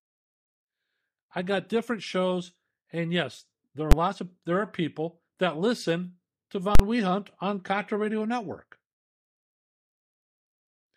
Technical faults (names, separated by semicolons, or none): invalid numbers at full scale